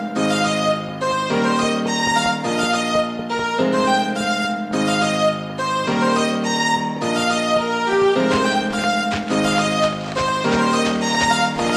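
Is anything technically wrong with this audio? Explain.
Yes, there's USB whine throughout: a faint, steady 1 kHz tone, roughly 45 dB under the audio, from the bus's 1 ms frame activity leaking in through power or ground.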